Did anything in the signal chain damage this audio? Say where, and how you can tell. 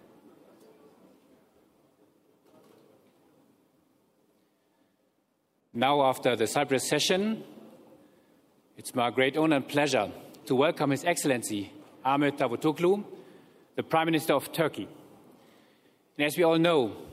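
No, nothing audible points to damage at any stage of the chain, from capture through to playback.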